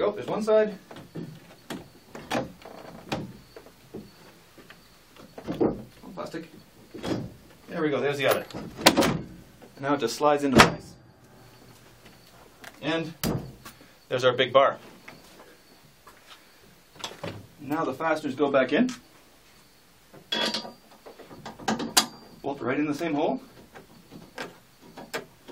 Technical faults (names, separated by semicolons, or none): none